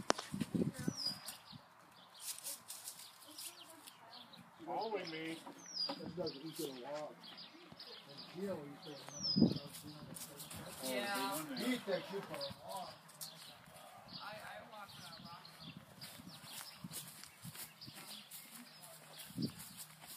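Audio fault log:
10.51–12.53 s, sudden gain jump: sound and background noise step up about 6 dB together, then drop back, likely a gain setting applied with no ramp.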